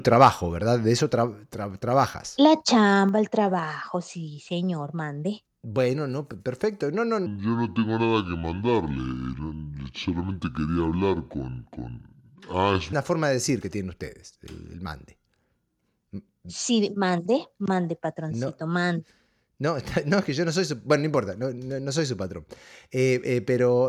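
Microphone overload, from 0.22 to 0.28 s: at the very start, the peaks of the speech run about 3 dB past the converter's ceiling, so their tops are sheared flat. Around three percent of the samples in that brief span are clipped. It is heard as a short, gritty crackle on the loudest moment. The likely cause is an input gain set too high on the microphone channel.

Section at the wrong speed, from 7.26 to 12.93 s: this stretch plays at 0.633 times its proper speed, so the pitch drops by roughly seven semitones along with the tempo. The speech turns deep, heavy and drawn out, then snaps back to normal just before "una forma de decir". The likely cause is that this segment was played back or edited against a mismatched clock.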